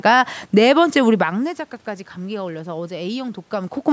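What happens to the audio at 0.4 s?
Nothing goes wrong at 0.4 s; the speech passes through intact at that moment.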